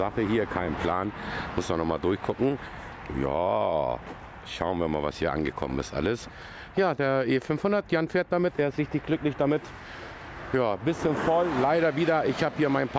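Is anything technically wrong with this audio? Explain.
No, no technical faults detected.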